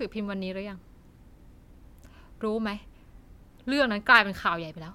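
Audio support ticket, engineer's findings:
Listened through the speech recording: nothing stood out, no findings to log.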